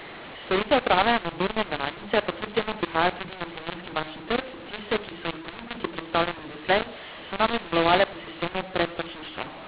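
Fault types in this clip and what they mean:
mu-law and A-law mixed up: the speech was coded as G.711 mu-law but read back as A-law throughout, scrambling sample levels into harsh distortion with noise filling the pauses. Ordinary G.711 quantisation noise stays faint.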